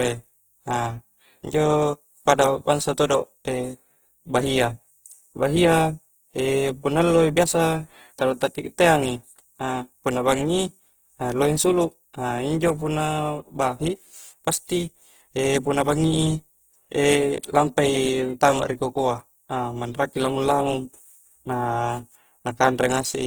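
From start to finish, the speech has a rough, grainy texture, with a noisy fizz in the upper bands, though the top end still reaches up to about 20.1 kHz. This is plainly audible throughout and points to Opus compression, likely in its CELT music mode at a low rate, around 16 kbps. Short of bits, the encoder preserves each band's energy but fills in the detail with folded or noise-like content.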